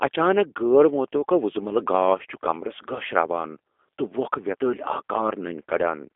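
Speech runs through a G.729 codec from start to end. The band is narrow. Little remains below 300 Hz or above 3.5 kHz, and nothing passes above 3.6 kHz. The codec damage is plainly audible. Each short frame is rebuilt from a vocal tract filter, a pitch predictor and a few pulses, so the speech sounds rough and synthetic. The roughness and the narrow band fit an 8 kbit/s G.729A stream.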